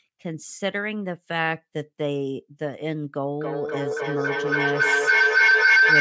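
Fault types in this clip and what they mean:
feedback howl: a tone near 1.5 kHz swells to the end, repeating roughly every 0.3 s, as a mic-to-speaker loop gains level each pass.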